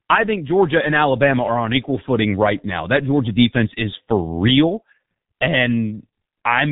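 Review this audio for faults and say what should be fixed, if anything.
Speech ran through the G.723.1 codec throughout, whose heavy coding, fitting a 6 kbit/s mode, cuts everything above 3.8 kHz, leaving it muffled and hoarse with blurred consonants. Carry the call over a wideband, higher-bitrate codec instead.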